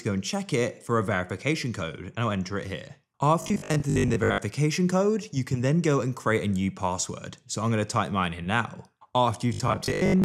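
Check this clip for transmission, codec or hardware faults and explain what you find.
Two stretches of robotic sound from repeated short buffers turn up, from 3.42 to 4.38 s and again from 9.54 to 10.24 s. It's likely that audio arrived too slowly, so the playback repeated roughly 20 ms chunks, about half the time, in place of skipped material. That stamps a rigid 50 Hz metallic buzz over the sound, which still loosely tracks the original.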